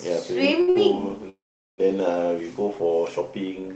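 Two packets arrived late in a row, emptying the jitter buffer, causing short stalls from late packets at 0.61 s and 0.70 s. Each holds the speech about 60 ms too long. From 1.29 s to 1.80 s a call audio freeze, likely from packets held up in transit, stretches the last sound briefly, then falls silent for about 0.4 s before resuming where it stopped, with the call codec's 8 kHz band limit throughout.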